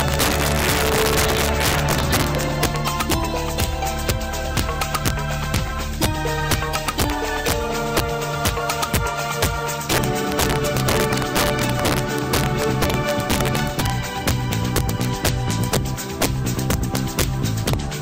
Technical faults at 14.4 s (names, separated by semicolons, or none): integer overflow